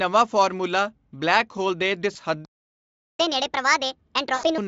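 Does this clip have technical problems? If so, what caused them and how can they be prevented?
Yes. Just after "ਹੋਲ ਦੇ", from 2.13 to 2.17 s, the speech briefly smears into a buzzy tone or coloured noise that fades, and again from 4.35 to 4.47 s. This is VoIP packet loss concealed by the speech codec. The Speex decoder filled the gaps by extrapolating its last pitch and filter while lowering the gain. The first gap fits one lost 20 ms packet, and the second fits about 80 ms of loss. Forward error correction, redundancy or a more reliable network path would prevent it.

From 2.45 to 3.19 s the sound cuts out mid-flow for about 0.74 s before resuming. This is a playback stall, likely caused by the player running out of buffered data or by its audio thread being blocked. A larger jitter buffer and a higher-priority, non-blocking audio thread would prevent it.

From 3.19 to 4.58 s the speech runs fast and high. 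This is catch-up at higher speed: the player resampled its backlog at 1.5 times normal speed, which raises the pitch by roughly seven semitones. Time-stretching that preserves pitch, or a smaller, gradual speed-up, would prevent it.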